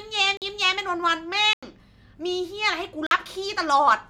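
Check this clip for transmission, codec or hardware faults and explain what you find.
Three blocks of digital silence interrupt the speech, at 0.37 s, 1.53 s and 3.07 s. They last about 46 ms, 93 ms and 46 ms, which fits whole 2048-sample output buffers going unfilled in time. Each cuts abruptly to silence and back, leaving a short hole.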